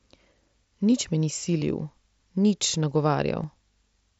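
At 1.60 to 1.62 s, concealed Bluetooth headset packet loss replaces about 22 ms, consistent with three lost packets, with repeated recent waveform, heard as a brief buzzy hold and warble. At 3.43 s, a single-packet loss is patched almost inaudibly.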